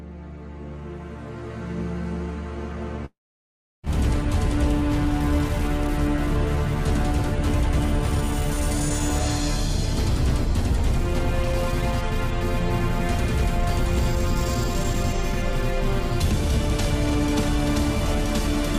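A long network dropout runs from 3.05 to 3.85 s. The sound is cut off mid-flow, and the last fragment is stretched into a brief buzzing smear that dies away within about a tenth of a second, leaving roughly 0.69 s of silence. The audio then resumes at 3.85 s, with about 0.78 s of material simply gone. The likely cause is a stall in packet delivery long enough that the receiver's concealment ran out and it could only fill the gap with nothing.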